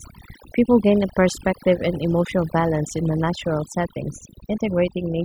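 From start to finish the speech shows overdone noise removal: a noise reducer pushed too hard, muting individual frequency bands whenever they sit close to its noise estimate, so faint parts of the voice vanish along with the noise. Pauses fall to near silence dotted with twinkling specks. Unlike a noise gate, which shuts everything at once, the damage here is scattered band by band across the spectrum.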